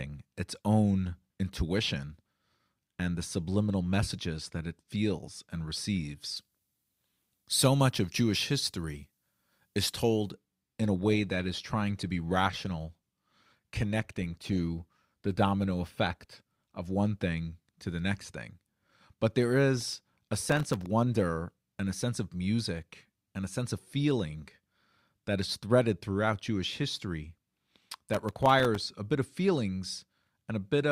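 From 6.37 to 10.31 s the pre-emphasis was left on: a treble boost was applied and the matching de-emphasis never undid it. The curve points to the 50 µs FM characteristic, leaving 10 kHz about 11 dB hotter than 1 kHz. The speech turns thin and glassy, with sibilants jumping forward and the body of the voice receding until the balance snaps back at 10.31 s.

Shortly after, from 10.64 to 16.64 s, an adaptive stream at a lower bitrate takes over. The player switched down to a cheaper version of the stream, which fits a step from about 64 down to 32 kbit/s Opus. With fewer bits, codec artefacts rise. The change arrives abruptly, without any dropout, and quality returns just as suddenly at 16.64 s.

Processor overload crackle follows twice, from 19.81 to 20.86 s and from 27.92 to 28.81 s. Here the processing could not finish its audio buffers in time, over and over, and each missed deadline was filled with silence. 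The gap lengths fit buffers of about 0.7 ms, so the dropouts are tiny but dense. Their hard edges pile up into a gritty, tearing crackle over the speech that stops once the load eases.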